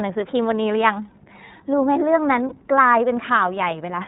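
The whole speech clip carries iLBC codec coding, and the damage is plainly audible. Nothing reaches above 4 kHz, so sibilants and consonant edges lose their brightness. Each frame's excitation is coded on its own, which leaves the voice a little rough and synthetic throughout. The character fits iLBC's 30 ms frame mode at around 13.33 kbps, its lower-rate setting.

From 2.49 to 2.53 s there is a lost iLBC frame. The audio there is a single gap of about 30 ms, consistent with one missing frame. The decoder filled it by repeating the last pitch cycle blended with noise. It comes across as a brief, held, slightly buzzy vowel where the natural movement of the voice should be. Because the next frame decodes without depending on the lost one, the voice returns to its coded sound immediately afterwards.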